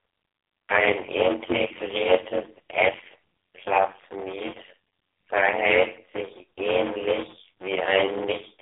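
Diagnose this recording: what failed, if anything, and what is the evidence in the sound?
A block size mismatch (padded) in the buffer stage: a steady buzz near 92 Hz runs throughout, and the speech drags at about 0.53 times normal speed, which fits 256-sample blocks zero-padded out to larger reads.

There's also an AMR narrowband mobile codec on the call path: nothing above 3.8 kHz, and heavy buzzy, synthetic damage suggesting the 5.15 kbps mode, squeezing the vocal-tract model very hard.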